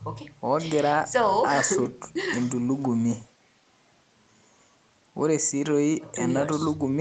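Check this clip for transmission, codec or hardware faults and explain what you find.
Nothing here sounds faulty: the speech comes through the call's microphone processing and codec as expected, with the top end stopping around 8 kHz as this kind of call path normally does.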